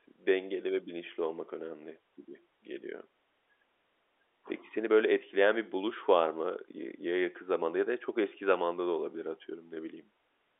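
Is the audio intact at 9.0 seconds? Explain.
Yes, the audio is intact at 9.0 seconds: the speech comes through the telephone channel cleanly there, with no dropout, click or distortion.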